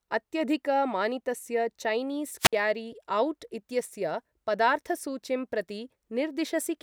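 A wireless microphone squelch dropout hits this speech clip at 2.39 s, just after "अत्यधिकमानितस्य चैनीस्": the analogue FM link fades, the receiver squelch cuts the output for about 58 ms, and a brief hiss rises into near silence before the voice returns by 2.53 s.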